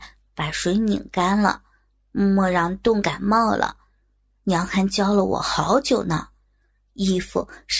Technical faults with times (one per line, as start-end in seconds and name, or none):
none